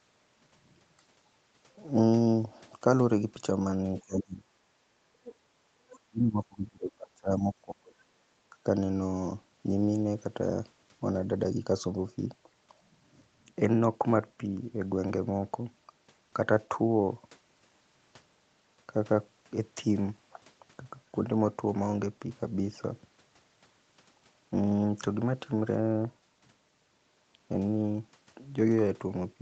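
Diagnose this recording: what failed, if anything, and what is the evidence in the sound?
Echo cancellation in the call processing likely misread double talk as echo. Speech is suppressed in double talk at 4.05–4.48 s and 6.08–8.55 s, dipping by up to about 35 dB.

The same echo canceller likely left residual echo. The other side's voice leaks through faintly at 5.24–5.35 s and 5.90–5.99 s, about 20–25 dB below the talker.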